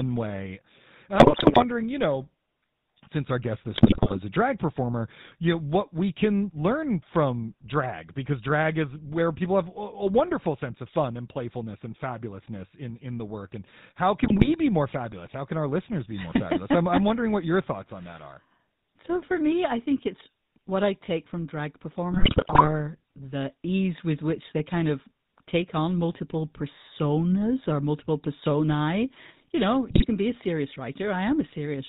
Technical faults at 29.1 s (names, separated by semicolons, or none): GSM full-rate codec